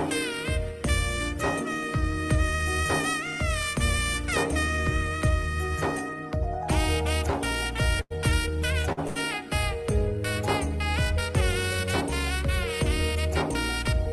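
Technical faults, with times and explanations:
8.01 to 9.18 s, short stalls from late packets: the sound hangs and smears with a faint buzz or dip four times, at 8.01 s (90 ms), 8.82 s (26 ms), 8.92 s (49 ms) and 9.07 s (83 ms). Each time a packet arrived late, the jitter buffer ran dry, and the receiver stretched the last audio until the packet came, resuming without loss.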